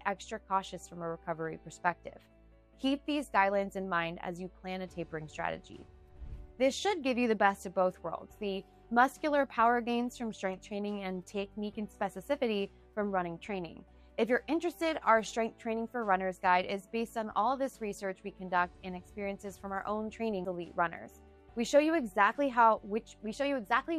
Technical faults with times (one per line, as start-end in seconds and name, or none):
20.45 CD skip